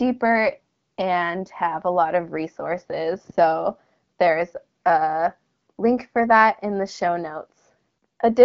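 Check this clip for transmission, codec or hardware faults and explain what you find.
No transmission, codec or hardware faults turn up in the speech, which carries only the light coding character of the AMR wideband (HD Voice) path, consistent with its 12.65 kbit/s mode, where the band up to 6.4 kHz is modelled and the top to 7 kHz is filled with shaped noise.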